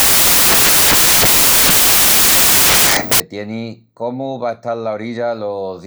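From the top of the clip to about 3.2 s, the speech is buried under samples built from the wrong bytes. The reader is stitching each sample's bytes together wrongly, so the jittery low-order bits end up acting as the big part of every value. What you hear is a wall of loud, harsh noise, close to white on the louder sounds. It clears just before "tieni cómu", where the speech comes through properly.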